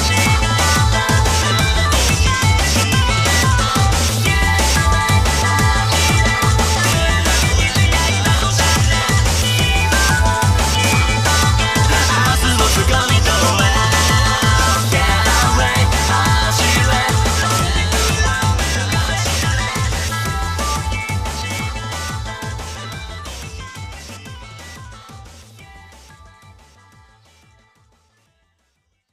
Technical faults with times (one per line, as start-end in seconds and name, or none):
none